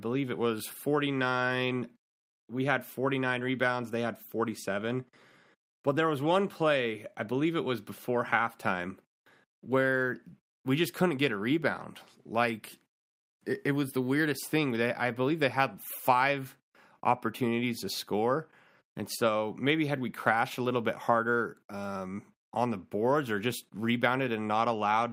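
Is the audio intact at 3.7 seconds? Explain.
Yes, the speech at 3.7 seconds plays through intact, with no dropout, click, distortion or other technical fault at that point.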